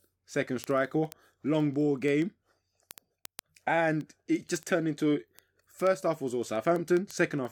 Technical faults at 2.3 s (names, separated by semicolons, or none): word clock ticks